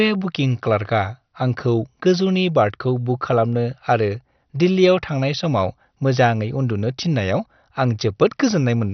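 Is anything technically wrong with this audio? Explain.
Yes. Across the whole clip the speech is dull and gurgly. Nothing comes through above about 6.1 kHz, and what's left has a granular, watery roughness, with upper frequencies flickering in and out. That's most likely heavy MP2 compression. Layer II splits the signal into 32 sub-bands and shares out a bit budget, and when bits run short the top bands get switched off and the rest are quantised coarsely. It sounds like a starved rate, which fits something around 48 kbps.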